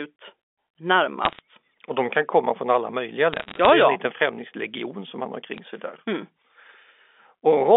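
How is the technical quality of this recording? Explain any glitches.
It's a narrow-band phone recording with three short bursts of crackle from bit errors on a digital phone line. The band sits roughly between 250 Hz and 3.5 kHz, as you'd expect from G.711 telephone coding.

The bursts fall at 1.25–1.39 s, at 3.33–3.70 s right after "komma från alla möjliga", and at 5.54–5.58 s between "främlingslegion som han har" and "sig där". Flipped bits, at about a third of a percent, corrupt individual samples, and hits on sign or high bits snap out as sharp ticks over the speech.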